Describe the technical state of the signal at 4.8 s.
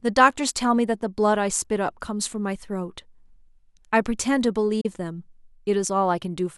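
At 4.81 s the speech cuts out in a digital broadcast dropout that lasts until about 4.86 s. The receiver lost the signal or rejected corrupt data and muted itself. About 32 ms of programme is gone, which fits a single lost frame. The sound fades out over roughly 8 ms rather than snapping off, so there is no click. The gap stays silent, with no repeated or smeared sound patched in as network concealment would produce, and the speech resumes further along in time.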